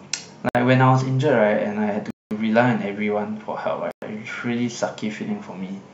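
At 0.49 s the speech cuts to silence for about 59 ms, at 2.10 s for about 204 ms, and at 3.91 s for about 110 ms, each time resuming abruptly. This pattern is likely a Bluetooth stall: radio interference delays packets, the receiver's buffer empties, and playback halts until retransmitted data arrives. The gaps are hard dropouts with no fade, and their differing lengths reflect how long each delay lasted.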